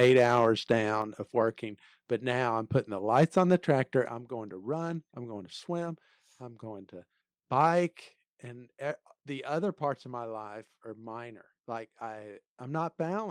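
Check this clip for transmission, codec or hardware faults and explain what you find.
Two problems show up here, and they're linked: the speech keeps overloading the microphone input, and the input level then gets pulled down in sudden steps.

Microphone overload hits from 0.0 to 0.45 s, again from 3.15 to 3.71 s, and briefly from 7.6 to 7.66 s just after "swim I'm going to". The loudest syllables get a harsh, crackly edge because their peaks run past the converter's ceiling, by about 5, 3 and 1 dB, and the tops get sliced flat. It's likely an input gain set too hot. A few percent of samples are clipped in the first burst and around one percent in the others.

Microphone volume stepped down happens at 1.02 s, 4.08 s just before "I'm going to run", and 8.16 s just before "and the other parts". Each time the voice and the background drop together in one abrupt step, by about 5, 7 and 4 dB, and each drop comes shortly after one of the distorted stretches. 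That points to the call software likely reacting to the clipping by turning the device's input volume down a notch.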